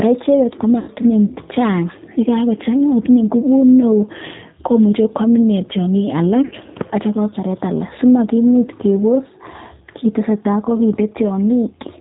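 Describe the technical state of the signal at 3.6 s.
G.729 codec coding is present at 3.6 s, as it is across the whole clip. The speech is rebuilt from a vocal tract filter, a pitch predictor and a few pulses per 5 ms half-frame rather than from the waveform itself. That leaves it intelligible but plainly rough and synthetic, with nothing above 4 kHz, a thin band-limited sound which fits a low-rate 8 kbit/s VoIP stream.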